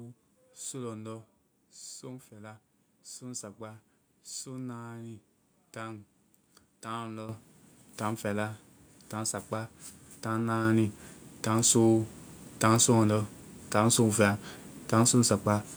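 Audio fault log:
7.29 s and 10.65 s, microphone volume stepped up: the call software judged the microphone too quiet and raised its input volume in single steps, about 10 dB then about 6 dB. Speech and background noise both jump louder together at each point.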